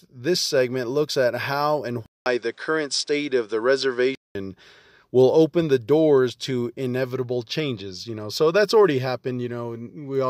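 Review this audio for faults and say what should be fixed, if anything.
Input switched to a poorer device, from 2.06 s to 4.35 s, just after "looks at how and": a 200 ms silence opens the section, then the band narrows with nothing above 9.8 kHz, so the speech turns duller, and a new background noise sits about 45 dB below the signal, while loudness barely changes. This likely comes from the recording switching mid-take to another microphone or a headset's call profile. To prevent it, lock the input device for the whole session and disable automatic switching.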